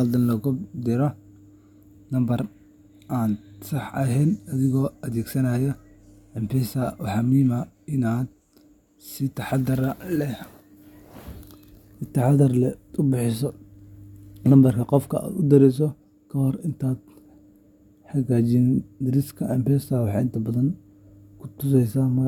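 Nothing here needs fixing: it's a speech recording with no technical faults to point to at any moment.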